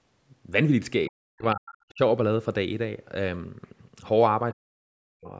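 Right around 1.07 to 1.12 s there's a brief scrap of the other side's voice leaking through, very faint, something like 35 dB under the talker. It's most likely the far end coming out of the loudspeaker and getting back into the mic because the echo canceller didn't scrub it all out. It's just a quick wisp, but it's a different voice, not an echo of the talker.

Straight after that, from 1.1 to 2.0 s, the talker gets pushed down in what sounds like speech suppressed in double talk. The level drops in chunks, at worst by around 40 dB, for roughly 0.7 s in total. The likely story is that both sides were talking together and the canceller couldn't tell its own talker from the loudspeaker echo, so it turned everything down. The same thing happens again from 4.51 to 5.31 s, with similar dips and about the same total length. The band topping out at 8 kHz is just the call's normal mic processing.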